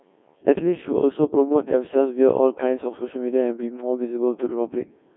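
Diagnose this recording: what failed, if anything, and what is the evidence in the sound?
The speech sounds robotic and buzzy from start to finish, with a synthetic quality and nothing audible above about 3.6 kHz. The usable band sits between roughly 250 Hz and 3.5 kHz. This is a failure at the codec stage, the signature of the Codec 2 vocoder. It transmits only pitch, voicing, energy and a coarse spectral envelope, then rebuilds the speech from sine waves, discarding the original waveform. The heavy degradation fits a very low rate near 1.6 kbit/s.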